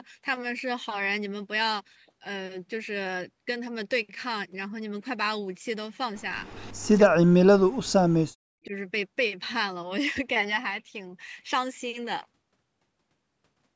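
Echo leak at 6.46 to 6.9 s in this speech clip: a faint copy of the speech, delayed by 303 ms and sitting roughly 30 dB below it, returns briefly. The likely cause is a far-end loudspeaker whose echo canceller let part of its microphone pickup slip back down the line. Speech suppressed in double talk at 7.09 to 7.9 s and again at 8.63 to 8.74 s: the talker's level collapses, first by as much as around 40 dB over most of that stretch, then by about 10 dB for a tenth of a second. Both sides were likely talking at once, and the echo canceller, unable to tell this voice from its own loudspeaker echo, pulled everything down together.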